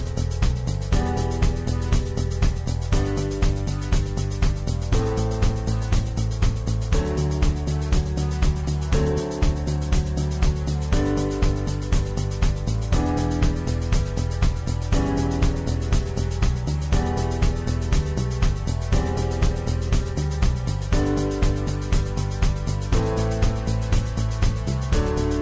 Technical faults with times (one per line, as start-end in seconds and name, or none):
none